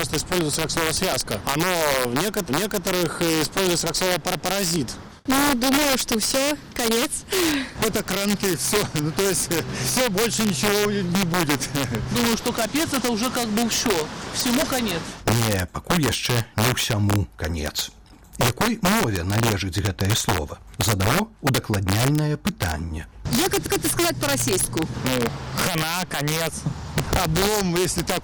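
Violent, hard cracks break out on the loudest peaks throughout the clip, far harsher than ordinary clipping. This is integer overflow: the signal was driven about 8 dB past the integer limit. Around one percent of samples wrapped to the opposite sign instead of being held at full scale, and each one snaps across the whole range.

At 1.12 s a single sharp loud pop, roughly 20 dB above the surrounding level, lands on top of the sound, which continues underneath. A brief electrical step from a switch, plug contact or static discharge is the likely cause.

From 2.49 to 2.86 s the audio stutters. A 371.5 ms stretch plays twice. These are repeated frames: a block that fits about four compressed frames was sent again, adding 371.5 ms to the running time.

At 16.07 s two pops arrive in quick succession, ending by 16.14 s and roughly 15 dB over the signal. This is likely the same kind of added pulse, shaped by the downstream circuitry into a short double thump.

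Between 23.66 and 23.85 s another repeated-frames stutter replays a 185.8 ms block once. That fits roughly two frames being duplicated, which lengthens the audio by 185.8 ms.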